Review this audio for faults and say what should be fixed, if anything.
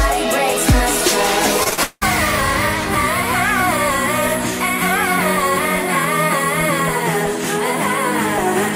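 Repeated packet loss hits between 1.63 and 2.03 s: four gaps, the longest 181 ms, were patched by stretching the preceding sound, so about 260 ms, roughly two-thirds of the stretch, is concealment, giving a choppy, robotic texture. A larger jitter buffer and redundancy or forward error correction on the network path would prevent this.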